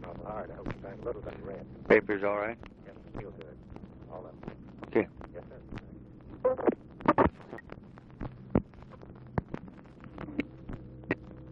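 At 1.29 s, from 7.58 to 7.60 s, and at 10.00 s, the audio is broken by short bursts of damaged data in a compressed stream. Each lasts roughly 20 ms and comes through as a brief chirp, squawk, click or short hole. At these points the encoded bytes are wrong or missing, so the decoder misreads or rejects the affected frames, loses frame sync, and scans forward for the next valid header before normal playback resumes.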